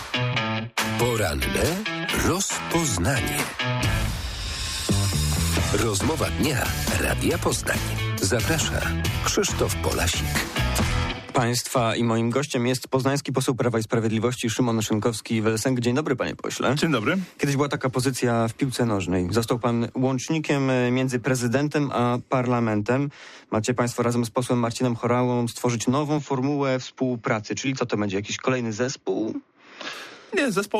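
From 26.18 s to 29.93 s the sound abruptly narrows and turns duller, with nothing above 7 kHz and a faint new noise floor roughly 45 dB down. There is no gap and no clear level jump. The likely cause is the input switched to a poorer device.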